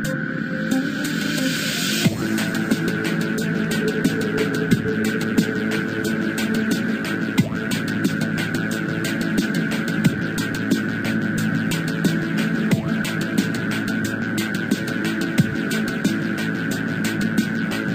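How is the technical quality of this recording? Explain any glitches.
The recording has one clear glitch. From 3.64 to 4.55 s there is a train of clicks. About five sharp pulses arrive, at roughly 4.5 per second, with uneven spacing. Each click is much like the others in shape. They peak at about 5 dB above the surrounding sound, so they stand out as distinct ticks or pops. The likely cause is interference from nearby equipment or a faulty connection or power supply injecting brief pulses into the signal path.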